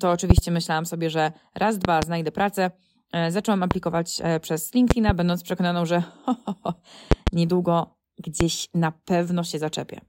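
Sharp loud pops cut through the speech six times, each standing some 20 dB above it while the talking carries on underneath: double pops at 0.30–0.41 s, 1.85–2.05 s, 4.91–5.12 s and 7.12–7.30 s, and single pops at 3.71–3.74 s and 8.41–8.43 s. Each is a brief electrical pulse added to the signal, likely from a connector, switch, static discharge or driver glitch, which the following circuitry turns into a hard pop.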